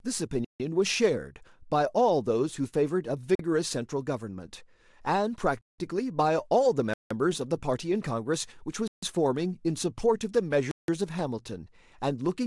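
Blocks of digital silence at 0.45–0.60 s, 3.35–3.39 s, 5.61–5.78 s, 6.94–7.11 s, 8.88–9.03 s and 10.71–10.88 s: the output buffer likely went unfilled, so the speech drops abruptly to silence for 43 to 171 ms and returns.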